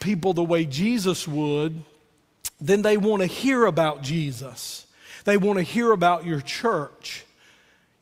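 No technical faults can be heard anywhere in this speech recording. There is nothing to locate in time and nothing to explain.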